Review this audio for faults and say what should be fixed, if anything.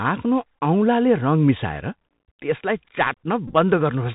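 Bluetooth CVSD headset codec damage runs through the whole clip. Nothing above 4 kHz survives, s sounds turn scratchy, and granular hiss sits under the speech, consistent with 64 kbps CVSD. A spectrogram shows a hard ceiling at 4 kHz with grainy noise between syllables. Prevent it by recording over a wideband path, such as mSBC or a wired microphone, rather than the narrowband headset link.

Bluetooth headset packet repeated at 0.56 s and 3.48–3.55 s. Lost packets were replaced by re-decoding the previous packet's bits. At 0.56 s, about 11 ms of sound is lost, fitting three packets, and it is heard as a brief tick-buzz. The second event loses 37.5 ms scattered over 67.5 ms, fitting about ten packets, with the longest run around 15 ms. Repeats every 3.75 ms give a buzz near 267 Hz, which shows as evenly spaced horizontal lines on a spectrogram and a short, periodically repeating cycle in the waveform. 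Prevent it by keeping the headset close to the phone and away from 2.4 GHz interference.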